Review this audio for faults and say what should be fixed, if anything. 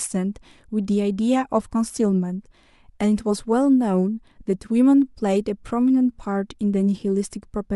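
Nothing to fix: no faults are audible anywhere in the speech.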